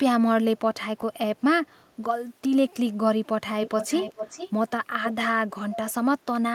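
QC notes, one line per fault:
1.01–1.03 s, chunks out of order: a 10 ms slice of audio shows up one chunk late, so it plays after the slice that should have come after it. Nothing actually goes missing, but the shuffle creates three hard joins in about 20 ms, which you hear as a tiny scrambled blip. It's very brief, so it comes across as a brief jumble rather than a full dropout.
3.62–4.51 s, 5.02–5.25 s and 5.71–5.92 s, echo leak: a repeat of the talker trails the original by 435 ms, sitting roughly 10 dB down in the first two stretches and closer to 15 dB down in the last. It comes and goes in patches rather than running continuously. The likely cause is a far end on speakerphone whose echo canceller didn't fully remove its loudspeaker pickup, so a delayed copy of the speech got sent back.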